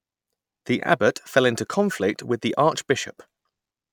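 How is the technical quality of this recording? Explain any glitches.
No glitches or technical faults can be heard here.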